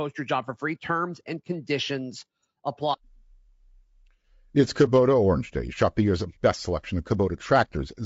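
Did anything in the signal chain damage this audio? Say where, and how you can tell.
Yes, at the codec stage, throughout the speech: voices sound rough and grainy, with noise filling the gaps between harmonics and a thin, artificial top band. This is likely low-delay AAC compression (AAC-ELD), whose short frames blur pitch harmonics, consistent with about 32 kbps.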